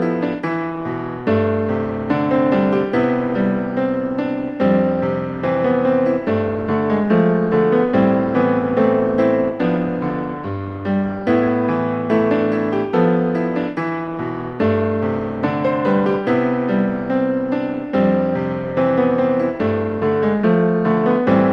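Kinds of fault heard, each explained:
No technical faults heard.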